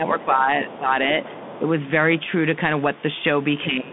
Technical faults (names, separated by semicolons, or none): Bluetooth CVSD headset codec; speech suppressed in double talk; other side's voice leaking through